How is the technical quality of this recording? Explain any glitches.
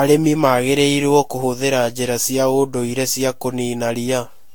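The recording is degraded throughout by generation loss. Across the whole speech clip, the audio was likely decoded and re-encoded with a lossy codec around seven times, each pass quantising again on a shifted frame grid so errors accumulate. The result is swirly, hollow speech with smeared consonant attacks, a character that fits repeated Vorbis passes at modest bitrates, and nothing above 19.2 kHz.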